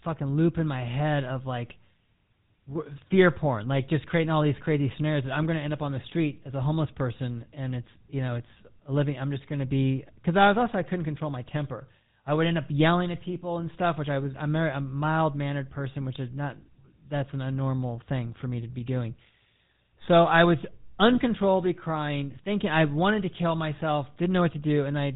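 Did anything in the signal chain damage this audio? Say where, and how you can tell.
Yes, the codec stage damaged it: the GSM full-rate codec is at work throughout. The speech carries a buzzy, gravelly roughness, and nothing passes above 3.8 kHz. A plain low-pass filter would dull the top without that grain, which comes from a sparse, regularly spaced pulse excitation, fitting roughly 13 kbps.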